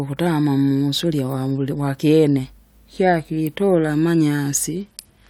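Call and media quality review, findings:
Speech, 4.81–5.30 s: treble dulls abruptly, gritty noise rises to the end. Bluetooth SBC bit pool drop. Link congestion starved top sub-bands, coarse quantisation elsewhere; fits bit pool falling 31 to 9, roughly 72 kbps.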